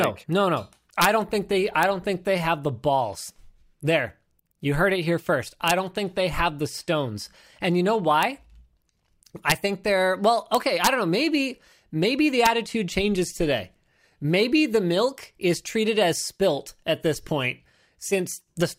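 Integer overflow: loud speech peaks ran past the integer limit and wrapped to the opposite sign instead of being held, so each peak flips across the full range and gives a violent crack, sharper than clipping. It strikes at 0.04 s before "no no no", at 1.02–1.05 s before "don't think they", at 1.83 s, 5.68–5.71 s, 8.23 s, 9.50–9.52 s and 10.55–10.87 s, and at 12.46 s between "maybe the" and "changes today". The overshoot is small, between about 0 and 2 dB.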